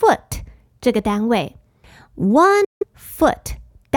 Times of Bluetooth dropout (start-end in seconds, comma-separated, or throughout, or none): 2.64-2.83